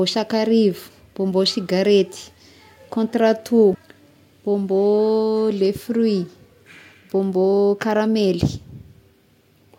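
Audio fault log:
3.71–3.75 s, damaged data in a compressed stream: a short glitch in the speech where the decoder hit corrupted frames, lost sync and hunted for the next clean frame header.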